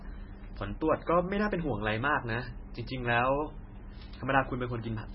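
Speech with heavy MP3 compression likely throughout, pointing to a very low bitrate near 16 kbps: a spectrogram shows a flat ceiling at 5.6 kHz and flickering gaps below, heard as watery, swirly smearing.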